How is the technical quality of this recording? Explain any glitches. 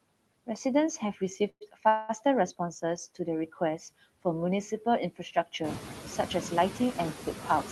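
The recording has three kinds of fault: constant processing from a noise suppressor, one moment where that suppressor swallows part of the speech, and two brief freezes in the call audio.

Noise suppressor artifacts run through the whole clip. The suppressor pulls down every band it judges to be steady background, by about 15 dB, and it makes that decision frame by frame. The background therefore dips between phrases and swells back underneath them. The room noise itself, which steps up by about 11 dB around 5.5 s, is part of the recording.

Speech cut by the noise suppressor occurs from 0.98 to 1.21 s. The suppressor mistook part of the speech for noise and turned it down with the background, by about 11 dB at the deepest point, across roughly a tenth of a second in total. The result is a soft, swallowed stretch where consonants or an ending fade out instead of landing cleanly.

Call audio freezes occur at 1.49 to 1.63 s and 1.89 to 2.11 s. 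Packets were likely held up in transit, so the jitter buffer ran dry and the receiver had to improvise. In the first freeze, 113 ms is filled, with about 60 ms of it going silent after the stretched sound fades. The second is a 202 ms fill that never reaches silence. Nothing is lost in either case. The audio picks up where it stopped, just later. The band also stops near 12 kHz, which fits the Opus call path.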